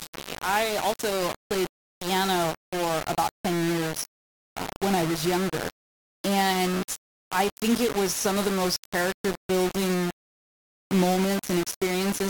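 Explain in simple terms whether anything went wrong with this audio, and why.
Grainy, rough distortion runs through the whole speech clip, from start to finish, and it grows and fades with the voice. That points to low bit depth without dither, likely from rounding to only about 3 bits, so quiet parts break into sputtering steps.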